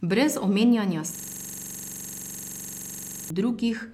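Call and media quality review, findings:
System hang loop, 1.15–3.30 s: one 42.67 ms slice of speech repeats identically, about fifty times, as a rough 23.4 Hz machine-gun stutter. It fits a 2048-sample output ring buffer replayed while the driver or host hung. Unlike concealment repeats, there is no fade or variation.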